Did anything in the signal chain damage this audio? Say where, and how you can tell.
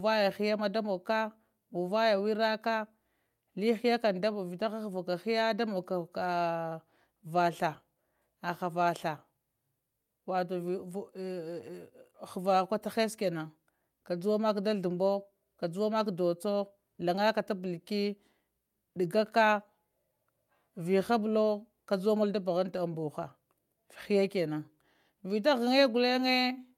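No, nothing audible points to damage at any stage of the chain; the signal stays continuous and intact throughout.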